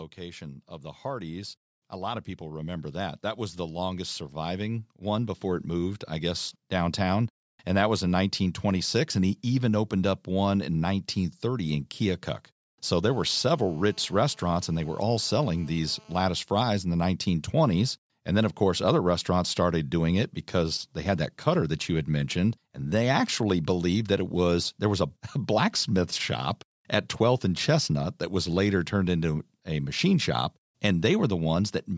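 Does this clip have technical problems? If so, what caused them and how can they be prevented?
Yes. Automatic gain rising runs from 0.16 to 7.26 s. The automatic gain control judged the input too quiet and slowly raised its gain by about 12 dB, so the voice and the background noise swell together over those seven seconds rather than the voice alone getting louder. To prevent it, set a proper input level before recording, or fix the gain manually so the control has nothing to correct.

GSM phone buzz runs from 13.06 to 16.24 s as a hard, raspy buzz at 217 Hz with a dense stack of harmonics, about 32 dB below the voice. A nearby 2G phone transmitting in timed bursts radiated pulses that the audio circuitry rectified into sound. It stays nearly steady, which points to an active call rather than a data transfer. To prevent it, keep mobile phones well away from microphones, cables and interfaces, or switch them to flight mode.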